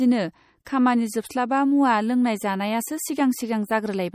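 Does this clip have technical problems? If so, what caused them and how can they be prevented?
Yes. Throughout, the speech sounds watery and swirly, likely from MP3 compression at a low bitrate near 48 kbps; a spectrogram shows faint components flickering between frames. Encode at a higher bitrate or keep a lossless original.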